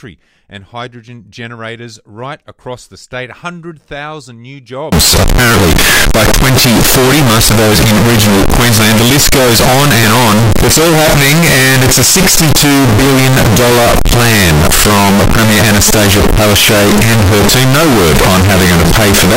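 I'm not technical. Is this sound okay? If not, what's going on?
No. From about 4.92 s to the end, the sound turns very loud, harsh and buzzy, and any background noise becomes as loud as everything else. You can still follow the pitch. The likely cause is a fault called float read as integer. The audio was saved in one number format, 32-bit float, but the player read it as another, 32-bit integer. So each value comes out wrong, and the wave gets squashed into a near-square shape.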